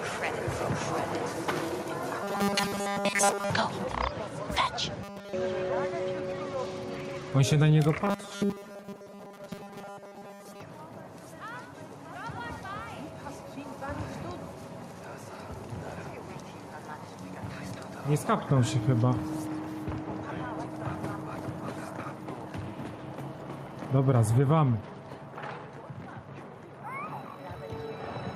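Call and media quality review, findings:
Gain pumping, whole clip. Gain swinging around 10 dB, pulled down on each loud sound. Loud and soft parts squeezed close together, sound squashed. Probable component: input gain set far too high for the microphone, likely with a fast limiter or compressor clamping every peak. Unlike a noise gate, the floor never cuts to silence. It breathes up and down smoothly with the program level.

Robotic sound from repeated short buffers at 2.23 to 3.50 s, 5.03 to 5.33 s and 8.05 to 10.61 s. Rigid metallic buzz fixed at 200 Hz, loosely tracking the underlying sound. Most of the audio is replaced in the first and third spans, all of it in the second. Probable component: capture or playback buffer starved, likely refilled by looping the last 5 ms, which sets the 200 Hz pitch. Unlike packet-loss dropouts or stutter, there are no gaps, just a steady, tonal buzz.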